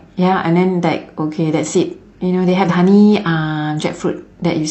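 At 0.28 to 0.34 s and again at 2.65 to 2.69 s, the speech breaks into a brief glitch, the mark of damaged data in a compressed stream. Corrupted bytes there leave the decoder misreading frames and hunting for the next valid header before playback steadies. On a spectrogram each spot shows a short vertical disturbance cutting across the speech harmonics; the waveform shows an abrupt break.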